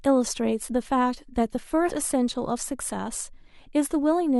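At 0.68 s and again at 1.88–1.93 s, compressed frames are skipped: the speech jumps ahead about a tenth of a second, consistent with roughly ten 10 ms frames.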